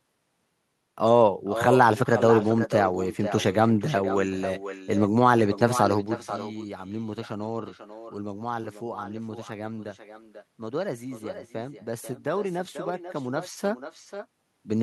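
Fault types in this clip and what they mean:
echo with no canceller: The far end plays this speech through a loudspeaker. Its microphone picks it up, and nothing removes it. So each phrase returns about half a second later. The copy sits about 11 dB down, thinner, throughout the clip.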